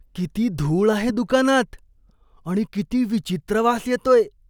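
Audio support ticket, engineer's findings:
Corrupt FLAC frame at 1.09 to 1.14 s, right after "किती धूळ आहे". Short error, about 44 ms, peaking around -18 dBFS. Sounds like flipped bits with no checksum check, so the decoder's prediction ran on garbage from the damaged bit on. Length points to two damaged frames. Clean again once an intact frame arrives. Worth checking the decoder's CRC handling.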